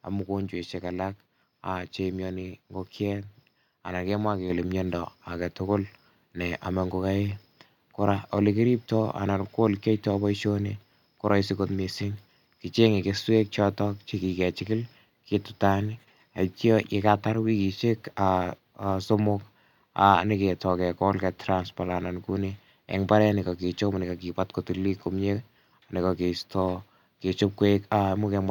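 A speech recording with one fault, a microphone volume stepped up at 4.5 s: the calling software judged the input too quiet and raised the device's capture gain in a single jump of about 5 dB. Voice and room noise get louder together and stay there. On a waveform the envelope widens abruptly at that instant; on a spectrogram every band, including the noise floor between phrases, brightens at once along a sharp vertical edge.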